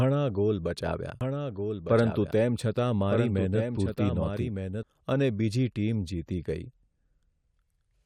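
From 1.21 s to 4.83 s a doubled audio track appears: a second full-band copy of the speech trails about a second behind, a few dB quieter, with no reverberant tail. It likely comes from a slower duplicate capture path. The waveform and spectrogram show overlapping, time-shifted repeats with abrupt edges.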